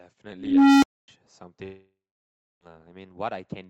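From 0.33 s a low tone near 300 Hz swells for 0.49 s, clips, then falls silent for 0.26 s: an unstable filter blowing up and resetting. From 1.63 to 2.63 s the sound trails off as a fading buzz, then 0.61 s of silence, with 0.98 s lost, likely a long network dropout.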